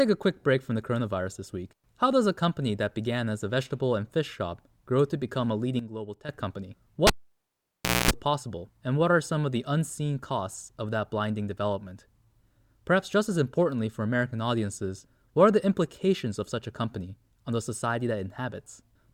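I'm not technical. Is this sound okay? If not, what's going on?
No. From 5.79 to 6.29 s, right after "grow to become a", the speech and background suddenly drop quieter together. That's a sudden gain jump, likely a volume setting changed instantly. At 7.07 s there's a pop, then about a second of near silence with a brief mains hum, and another pop at 8.11 s before "possible and what are". That's a cable pulled and plugged in.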